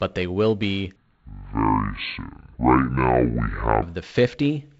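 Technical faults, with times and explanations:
0.96–3.82 s, section at the wrong speed: This stretch of speech plays at 0.569 times its proper speed. Pitch and pace fall together, so the voice drops by roughly ten semitones and drags, sounding deep and slow. It snaps back to normal at 3.82 s. The likely cause is playback or editing against the wrong clock, which stretches the samples in time. The wideband telephone band limit near 7 kHz carries through the slowed part too.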